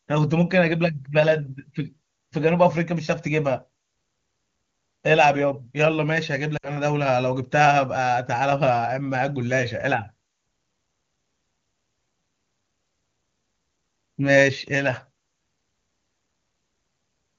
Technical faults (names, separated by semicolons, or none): lost AMR speech frames